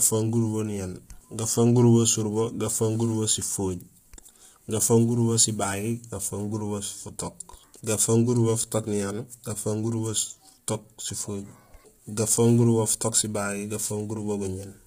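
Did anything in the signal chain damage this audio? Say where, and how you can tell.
Yes, at the codec: throughout, the speech sounds rough and grainy, likely from heavy low-delay AAC compression at a low bitrate. A spectrogram shows noise between harmonics and nothing above 15.6 kHz.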